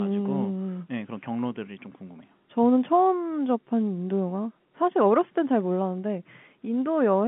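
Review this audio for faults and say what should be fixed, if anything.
Nothing needs fixing: the speech carries the narrow 150 Hz to 3.4 kHz band of G.711 telephone coding, whose level-following quantisation hiss sits faint beneath the signal, in keeping with a standard 64 kbps A-law phone line.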